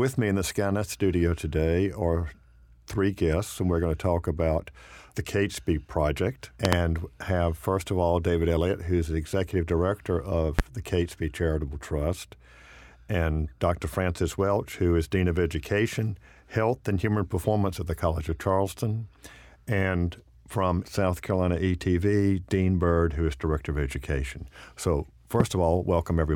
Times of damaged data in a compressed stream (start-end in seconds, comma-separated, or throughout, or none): none